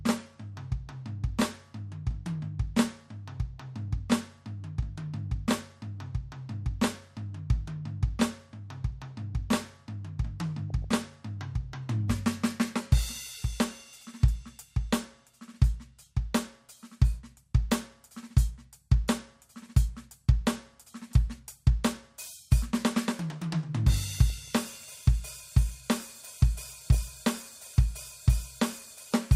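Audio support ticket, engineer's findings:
DAB burbling on the music, four bursts: 2.31–2.43 s, 10.70–11.02 s, 24.09–24.85 s (longest, about 0.75 s), 26.68–27.03 s. Symptom: short blips of noise over the programme. Probable component: receiver front end and MP2 decoder. Mechanism: weak reception lets a small fraction of bit errors, a few per thousand, slip past error correction. Corrupted samples put noise blips in single sub-bands and corrupted scale factors make sub-bands jump in level for up to a frame, across a run of consecutive frames.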